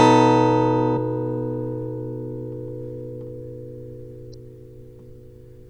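At 4.30 to 4.34 s the audio breaks into a brief glitch, the sign of damaged data in a compressed stream. Bytes in the encoded file went bad, so the decoder misread the frames there, lost sync and hunted for the next valid frame header before resuming. This 40 ms burst comes from misdecoded frame data.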